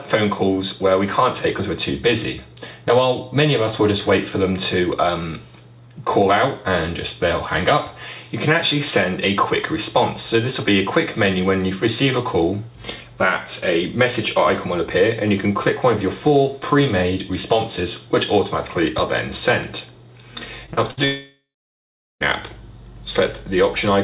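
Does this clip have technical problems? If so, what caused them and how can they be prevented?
Yes. Short concealed packet loss at 20.66 and 20.73 s: about 20 and 40 ms never arrived and were filled by extending the previous sound, showing as brief smeared, repeated spectrogram frames. Prevention: a larger jitter buffer or forward error correction lets the receiver recover such isolated losses.

A burst of packet loss at 20.91 to 20.99 s dropped about 60 ms. The receiver stretched the last sound and faded it, leaving a decaying buzz or hiss in the waveform before the audio resumes further on. Prevention: stabilise the network link, for example with wired rather than congested wireless connections.

From 21.05 to 22.22 s the audio is replaced by a fading continuation, then roughly three quarters of a second of flat silence on the waveform, with 1.16 s of content missing. This is likely a long network dropout. 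Prevention: monitor connection quality and add redundant routing or automatic reconnection.

Throughout, the spectrogram shows nothing above 4 kHz, which fits the 64 kbps G.711 A-law codec on the call path.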